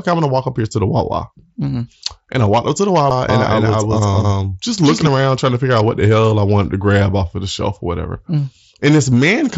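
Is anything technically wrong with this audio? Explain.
Yes, there are three separate glitches, all heard through an mSBC Bluetooth headset link whose light grain and 8 kHz top end come with the codec.

At 3.10 s there's a CD skip. The laser hopped to a different turn of the disc's spiral, so playback mutes for just a few milliseconds, ticks, and carries on from another point, so the sound jumps rather than flowing on.

From 3.29 to 5.07 s you get a doubled audio track. A second full-band copy runs about a fifth of a second behind and at about the same level, with no room colour, and it cuts in and out abruptly. That's likely a second, slower capture path or an edit left holding two copies.

At 8.81 s there's concealed Bluetooth headset packet loss. Roughly 7.5 ms went missing, which fits a single lost packet, and the receiver patched it by repeating a closely matching slice of the preceding waveform. 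Because it's a lone loss, it's nearly hidden, just a faint hitch.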